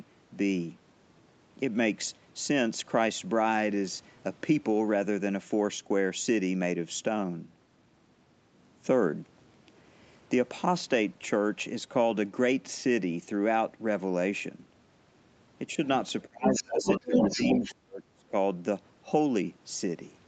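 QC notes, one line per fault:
16.27 to 16.86 s, speech suppressed in double talk: the talker dips sharply, about 30 dB at worst, likely because the echo canceller ducked everything while both sides spoke.
16.45 to 17.75 s, other side's voice leaking through: a second voice comes up roughly as loud as the talker, likely echo the canceller didn't fully remove.
17.06 to 18.33 s, speech suppressed in double talk again: the talker gets pulled down by about 35 dB in places while that other voice overlaps.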